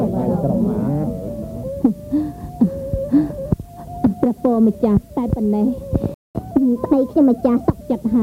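At 6.14 s the sound cuts out for about 0.21 s, until 6.35 s. This is a playback stall. The output simply falls silent mid-flow. The likely cause is a player that ran dry of buffered data or had its thread blocked. The sound then resumes.

From 6.35 s to 7.74 s comes catch-up at higher speed. The player works off its backlog by resampling, running at 1.15 times normal speed. Pitch rises by about two semitones and tempo hurries. Both settle back at 7.74 s.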